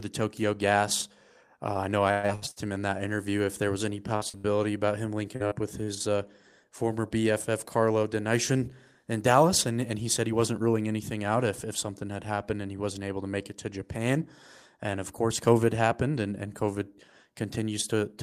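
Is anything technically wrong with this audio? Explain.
Yes. From 2.11 to 2.59 s, between "I know I" and "him in that interview", repeated packet loss (robotic sound) leaves four gaps, the longest 168 ms. Concealment stretches the last audio across 62% of that span, so the speech turns choppy. A second burst, from 4.16 to 5.91 s between "if there was any" and "uh former", has six shorter gaps of up to 72 ms.

From 10.27 to 10.74 s, between "and and he said" and "anything out if if", a jitter buffer speed-up trims about 50 ms of pitch-period slices to drain excess buffered delay. Speech runs at 110% speed with unchanged pitch and sounds briefly hurried.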